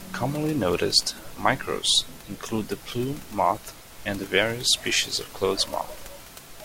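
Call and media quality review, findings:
No faults found; room noise sits about 21 dB below speech.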